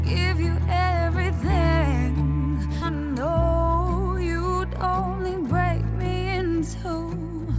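There's a skip ahead at about 2.82 to 2.84 s. Roughly 0.4 s of audio vanishes and playback jumps straight forward with no fill. It sounds like the jitter buffer overflowed and dumped a backlog, or packets were lost in transit. The call path tops out at 8 kHz, which fits a wideband call codec.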